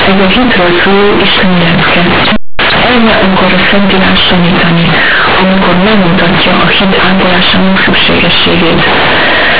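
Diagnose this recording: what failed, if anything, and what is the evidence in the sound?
Very loud, buzzy distortion throughout, with heavy noise filling pauses: companded audio read as linear, a sample-format conversion fault playing A-law bytes as unexpanded 8-bit samples.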